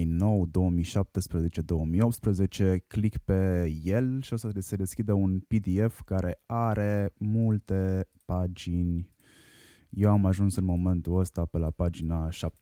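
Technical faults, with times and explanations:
Nothing stood out as a technical fault on listening to this speech recording.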